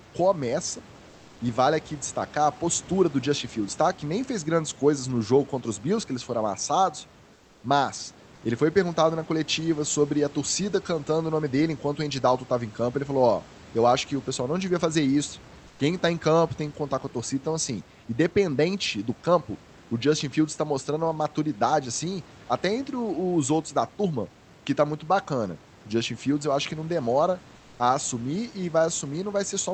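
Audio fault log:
1.09–1.39 s, 7.33–7.63 s, 15.67–15.79 s and 27.55–27.79 s, comfort noise in place of the background: In four short pauses, lasting 0.12 to 0.3 s, the room's real background gives way to a smooth, featureless hiss, about 3 to 4 dB quieter. One gap follows "que eles foram amassados" and another comes after "acho que não demora". The likely cause is Opus discontinuous transmission. The sender went quiet when no speech was detected, and the receiver filled the gap with synthetic noise.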